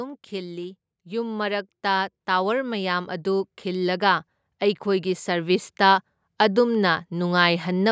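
Speech with automatic gain rising twice: from 0.29 to 4.28 s the level climbs by about 8 dB, then from 4.84 to 7.87 s by about 6 dB. The waveform envelope widens steadily, and the spectrogram brightens across all bands below the 8 kHz call cutoff as voice and background swell together.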